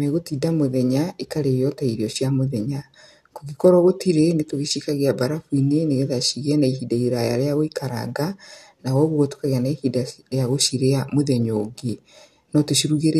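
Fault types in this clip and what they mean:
No faults can be heard anywhere in this speech recording.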